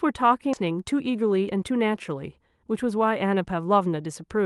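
A skip ahead at 0.53 to 0.55 s in this speech clip drops roughly 0.4 s of audio, likely discarded by an overflowing jitter buffer, so playback jumps forward with no gap. Jitter buffer speed-up then runs from 0.63 to 2.16 s: the receiver repeatedly trims pitch-period-sized pieces, removing about 0.15 s in total, so the speech plays at 109% speed at the same pitch and sounds hurried.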